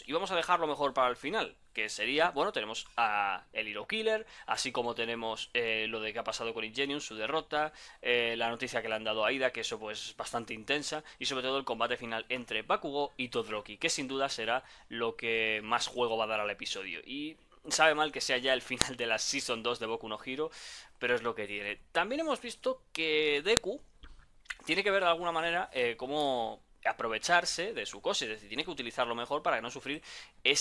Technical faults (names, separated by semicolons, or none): file header played as audio